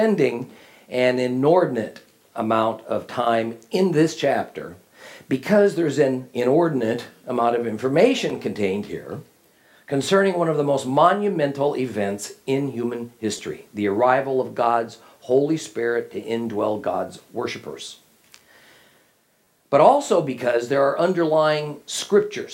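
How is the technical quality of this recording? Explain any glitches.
Three brief playback glitches occur, all of the repeated buffer kind. At 8.30 s and 13.38 s, fresh audio failed to reach the output in time, so the device replayed its last block once. At 19.45 to 19.47 s it replayed the block twice. Each block lasts about 10.7 ms, which fits a 512-sample buffer. Because the repeats are so short and hard-joined, they sound like clicks or a brief buzz rather than a stutter, with about 10 ms of audio lost at the first two and about 20 ms at the last.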